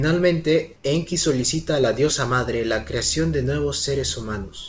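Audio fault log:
0.76–0.84 s, comfort noise in place of the background: for about 80 ms the background, sitting roughly 30 dB below the loudest speech, turns into a flat, featureless hiss about 4 dB quieter before the real background returns. The likely cause is discontinuous transmission: the sender's voice detector judged this gap silent and stopped sending, so the receiver filled it with synthetic noise shaped only roughly like the room's sound.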